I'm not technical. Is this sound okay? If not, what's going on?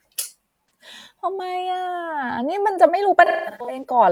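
No. AAC frame loss with concealment shows up at 0.66 to 0.70 s and again from 3.25 to 3.84 s. Chunks of the compressed audio went missing, so the player filled each gap by guessing from the last good sound. The first gap is brief, a smeared, noisy blip. The second is a scattered run of dropouts, the longest about a fifth of a second, where the speech turns phasey before recovering.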